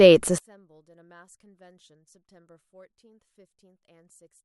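From 0.38 s to the end, the speech collapses to a faint trace about 37 dB down, as it would if one channel were inverted. Likely one stereo side has reversed polarity, so the shared centre content cancels when summed to mono. The waveform shrinks to near-flatness, and the spectrogram fades almost to background.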